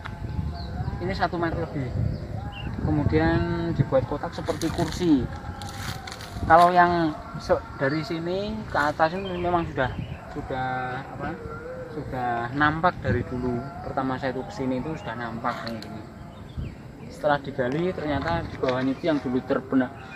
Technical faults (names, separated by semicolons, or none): compressed frames skipped